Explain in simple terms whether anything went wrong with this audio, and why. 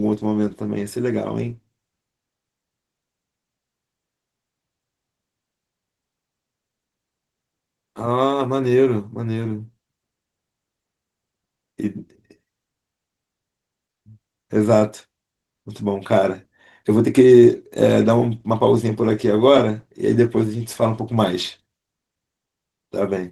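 Opus voice compression affects the whole clip, making the speech hoarse and faintly robotic. Unlike simple muffling, the high end stays present; the roughness comes from coarsely coded detail.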